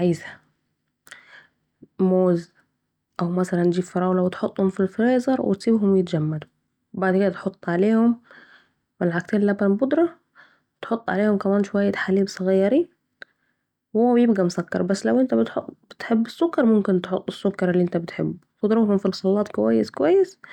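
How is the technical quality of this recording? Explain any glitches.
Listening to the speech recording, nothing stood out as a technical problem, so there are no glitches to explain.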